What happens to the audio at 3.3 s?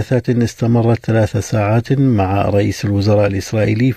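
Nothing goes wrong at 3.3 s: the audio plays through that moment intact, with no dropout, click, distortion or other fault.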